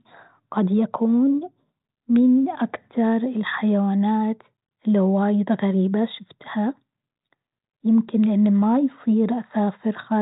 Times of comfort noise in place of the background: none

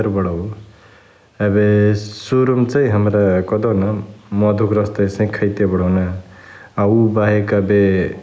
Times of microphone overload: none

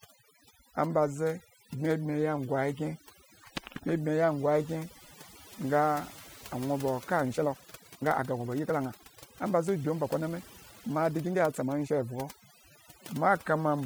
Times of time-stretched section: 7.19-11.91

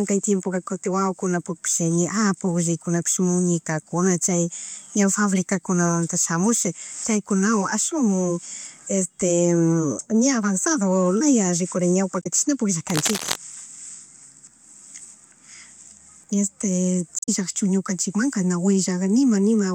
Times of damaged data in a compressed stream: 12.19-12.27, 17.16-17.29

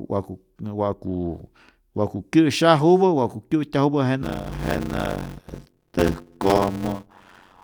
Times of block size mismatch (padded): 4.22-7.63

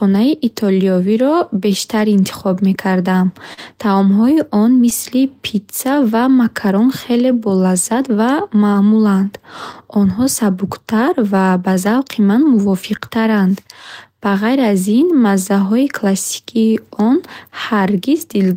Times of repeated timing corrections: 0.36-18.47

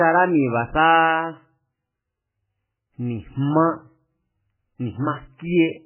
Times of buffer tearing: none

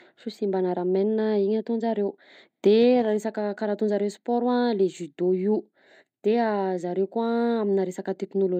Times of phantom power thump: none

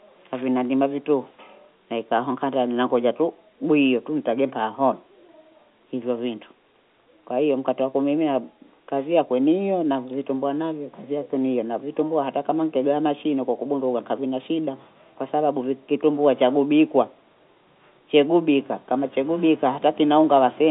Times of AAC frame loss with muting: none

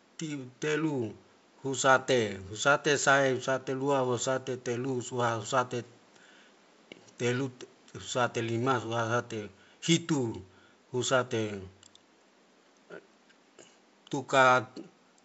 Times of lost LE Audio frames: none

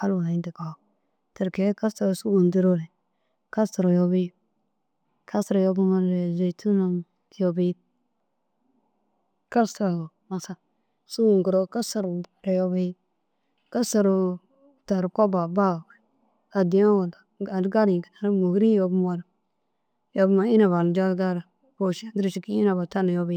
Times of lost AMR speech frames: none

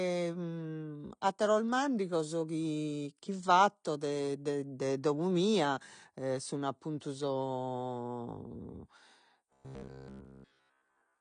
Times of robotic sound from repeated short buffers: 9.53-11.21

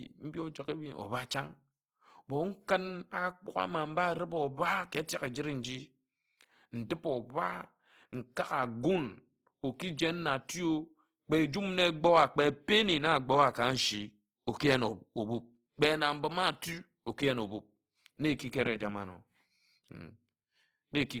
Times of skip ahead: none

